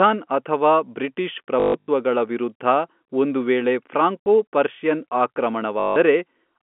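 Telephone-band speech over G.711 with packet loss with last packet repeated: buzzy robotic stutters at 1.6–1.88 s after "ಅಥವಾ ಬ್ರಿಟಿಷ್", 4.23–4.26 s, and 5.8–5.96 s. The waveform shows identical repeated blocks, which fits 20 ms packets.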